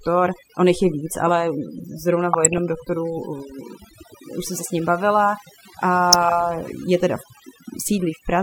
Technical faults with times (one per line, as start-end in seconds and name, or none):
0.00-8.42 overdone noise removal
2.33-2.58 DAB burbling
6.13-6.43 DAB burbling